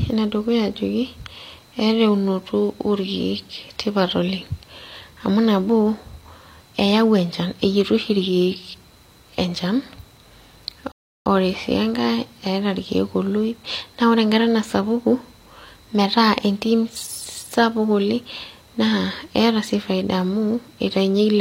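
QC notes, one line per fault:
10.92–11.26 s, rebuffering stall: the speech cuts abruptly to silence for about 0.34 s, then picks up at exactly the point where it broke off. The playback buffer ran dry and the player halted until more downloaded audio arrived, so nothing is skipped or repeated; the gap is simply inserted, adding 341 ms to the running time. The hard edges on both sides of the silence come from output stopping and restarting mid-stream.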